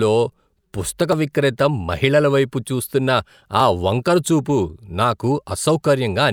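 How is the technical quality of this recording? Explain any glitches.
The recording has one glitch. At 1.13 s, audio missing between chunks causes a small skip. About 20 ms is lost, likely where processing working in 2.5 s chunks drops audio at a boundary.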